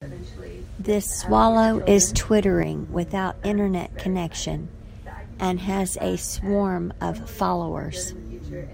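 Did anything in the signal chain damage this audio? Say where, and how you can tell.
Yes. A sudden gain jump runs from 1.24 s to 2.63 s. The speech and the background noise both step up by about 6 dB at the same instant, hold that level, then drop back together at the end. Because the noise floor moves in lockstep with the speech, the change happened to the digital signal after capture, not at the source. The likely cause is a gain setting or bit shift applied in the processing stage without a ramp.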